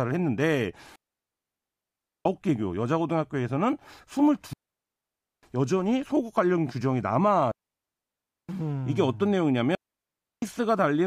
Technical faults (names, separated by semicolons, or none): digital wireless dropout